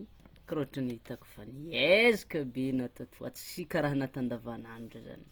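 Opus compression runs through the whole speech clip, and it is plainly audible. The damage sounds like a low-bitrate encoder in its music mode, likely Opus CELT at around 24 kbps. That mode keeps each band's overall energy but runs short of bits for detail, so it patches bands with folded lower content or noise. The voice comes out grainy and rough rather than swirly, while the bandwidth stays full, reaching about 20.2 kHz.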